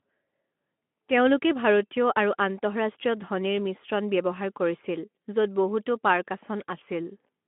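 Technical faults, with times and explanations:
No technical faults can be heard in this speech clip. It comes through a Speex codec on a telephone-style line of roughly 200 Hz to 3.4 kHz, with nothing above 3.8 kHz and only light codec roughness, which fits a rate of around 15 kbps.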